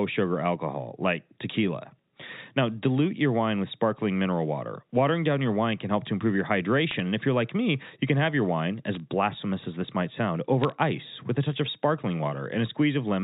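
Speech with short crackly bursts from bit errors on a digital phone line at 6.91–7.0 s, 8.94–9.0 s and 10.64–10.72 s. Flipped bits corrupt individual samples into sharp ticks, which show as isolated waveform spikes and thin full-height vertical lines on a spectrogram.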